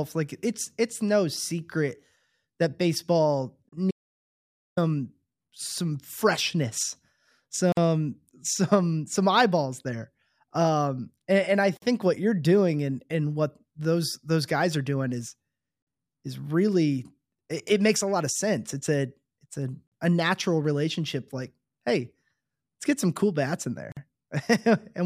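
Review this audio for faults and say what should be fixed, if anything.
From 3.91 to 4.77 s the speech cuts out to total silence. About 860 ms is lost, with no room tone in the gap. This is likely an audio dropout to silence: the input vanished while silence kept being written. Check connections, links and mute controls before recording.

Short gaps at joins of encoded pieces open at 7.72, 11.77 and 23.92 s. Each lasts 49 ms, with smeared edges. The speech then resumes where it stopped. Pieces were encoded separately and joined untrimmed, so encoder delay and final-frame padding remain. Encode in one continuous pass, or trim the padding at every join.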